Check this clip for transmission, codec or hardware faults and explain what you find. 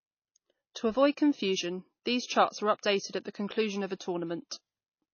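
One fault is present, and it lasts the whole clip: MP3 compression damage. The speech stops dead above 6.6 kHz and sounds plainly watery. The likely cause is an MP3 encoder short of bits, fitting roughly 24 kbps. It cuts the treble and drops weak frequency lines that flicker between frames. Sibilants turn swirly and metallic. Consonant attacks smear.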